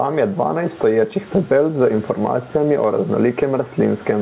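Gain pumping runs throughout the speech. The level swings by roughly 15 dB. The room noise sits about 35 dB below the speech. Loud and quiet passages sit close together, so the speech sounds squashed and breathing. The likely cause is input gain set far too high, with a fast limiter clamping each peak. The sound also stops at 4 kHz, which fits a narrowband call codec.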